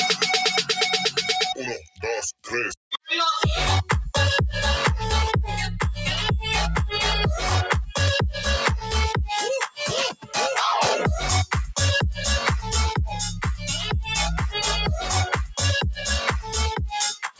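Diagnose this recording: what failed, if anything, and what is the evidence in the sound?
The call processing chain failed: a speech noise suppressor was applied to music or sounds and left active on non-speech audio. It treats sustained, steady content as background noise, so gain keeps shifting by around 5 dB across the whole recording. Onsets pass through, but held material and decays are pulled down, which makes the sound pump and thin. The band stops near 8 kHz, as the call path's normal limit.

The same suppressor also produced distinct episodes of sound cut by the noise suppressor. Between 1.77 and 2.03 s and again between 2.33 and 2.53 s, the level drops by about 20 dB. At 10.12 to 10.36 s it dips by about 16 dB, and from 17.14 s to the end it falls by about 20 dB. In each case the suppressor judged that sound to be noise and cut it.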